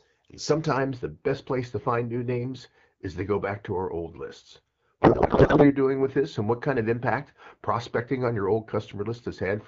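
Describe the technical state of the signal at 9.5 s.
At 9.5 s the speech sounds hollow and slightly dulled, with a thin, phasey edge to the upper range. This is channel delay (comb filtering), present from 0.77 s through to the end of the clip. One channel trails the other by only a few samples, around a tenth of a millisecond, so when the two are summed to mono, content common to both cancels at a fixed notch near 5 kHz.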